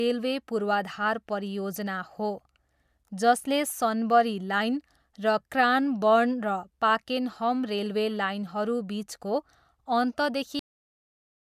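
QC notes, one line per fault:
10.59–11.58 s, cut-off end: the speech just stops dead at 10.59 s, mid-sound, and the last second is flat digital silence with no natural tail or room decay. That's what you get when the final buffers never make it to disk or the output.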